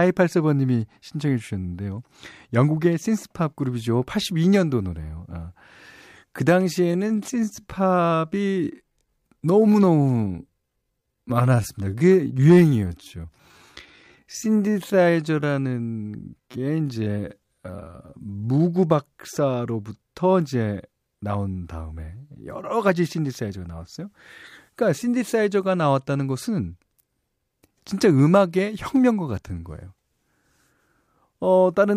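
From 6.76 to 18.60 s, a time-stretched section plays at 0.7 times speed, likely from software stretching it to fit. The pace drags while the pitch stays unchanged, unlike slowed playback.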